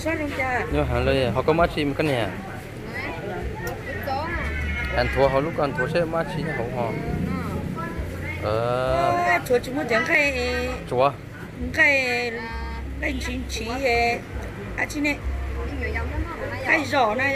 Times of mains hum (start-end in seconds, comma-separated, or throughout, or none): 12.78-17.36